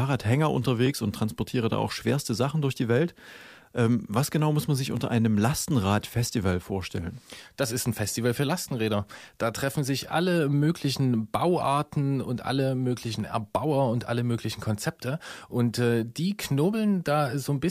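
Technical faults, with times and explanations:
0.86–17.31 s, clock drift buffer slips: A short click recurs about every 4.11 s, roughly five times in the speech. The likely cause is two clocks disagreeing by a couple of hundred parts per million, so a few dozen samples are periodically dropped or repeated.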